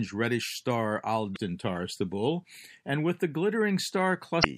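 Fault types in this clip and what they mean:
MP3 compression, throughout: The speech has a plainly audible watery, swirling quality, with the treble cut off and consonants such as s sounds turning metallic and chirpy. This is likely MP3 coding with too few bits, in keeping with a 64 kbps encode. The encoder discards high frequencies and drops quiet spectral detail, so components flicker in and out between frames and sharp onsets blur.
Damaged data in a compressed stream, 1.32 to 1.37 s and 4.40 to 4.46 s: Two brief blips of about 50 ms each break into the speech. Corrupted bytes in the compressed stream make the decoder misread or reject frames at those points. It loses its place, searches for the next valid frame header, and resumes decoding once it finds one, leaving a momentary glitch in the audio.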